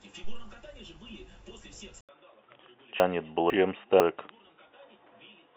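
At 2.01 s the recording likely switched its input to a poorer device, such as another microphone or a headset's call profile. After a gap of about 80 ms, the speech returns narrower, with nothing above 3.8 kHz, so it sounds dull and boxy to the end. The level also drops by around 10 dB, and a new, faint background noise sits well below the speech.

Between 3.0 and 4.0 s the chunks play out of order. A 500 ms chunk of audio was delayed by one chunk, so the two halves of that second are heard swapped. No sound is missing, but the speech jumps backward and forward in a jumbled way, and there are three hard joins where the misplaced pieces meet.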